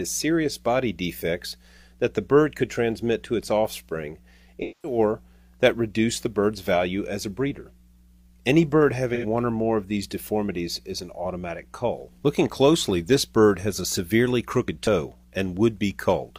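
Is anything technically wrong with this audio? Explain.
Yes, there is AAC frame loss with concealment, at 4.62 to 4.98 s and again at 9.14 to 9.25 s. Compressed frames went missing and the decoder filled each gap by reusing the last good spectrum with altered phase and energy. About 210 ms was reconstructed in the first gap, and about 85 ms in the second. Both sound like brief smeared, noisy or phasey patches. A plain dropout would instead leave a hard silence with clicks at its edges.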